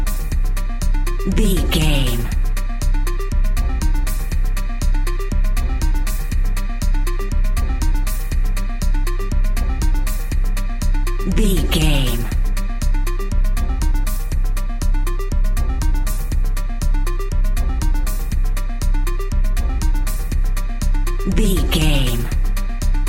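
Nothing is technically wrong with this audio; no faults can be heard at any point.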